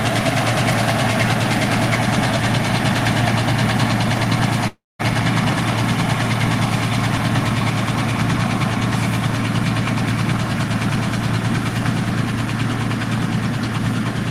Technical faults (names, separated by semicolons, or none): call audio freeze